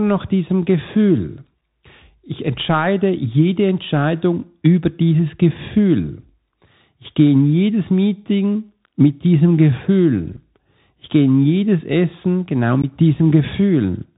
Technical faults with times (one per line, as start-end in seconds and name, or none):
0.00-14.17 Bluetooth CVSD headset codec
10.37 unconcealed Bluetooth headset packet loss
12.82-12.85 unconcealed Bluetooth headset packet loss